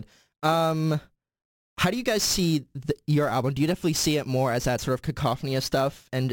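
Sample clock jitter runs throughout: the converter's clock wanders by around ten microseconds, so each sample lands slightly off time. The resulting error, roughly 20 dB below the speech, is a gritty hiss that swells on loud, bright syllables and disappears in pauses.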